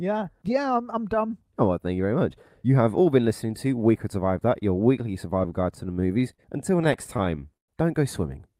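From 5.75 to 6.40 s the speech hits repeated stalls, a stutter. Packets reached the receiver late, so its jitter buffer ran dry five times. Each time it stretched the last sound to cover the wait, about 96 ms in all. No speech is lost, but it drags. The stutter returns from 6.84 to 7.70 s with seven stalls and 182 ms filled. The longest wait, 111 ms, fades out.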